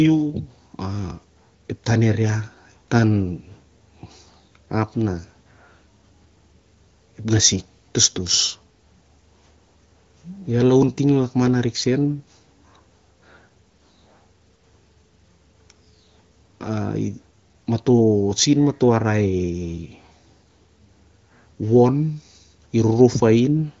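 Nothing here stands out as a fault: the speech comes through the AMR wideband (HD Voice) codec running at 18.25 kbit/s, so the top end simply stops at around 7.1 kHz, as you'd expect from that path.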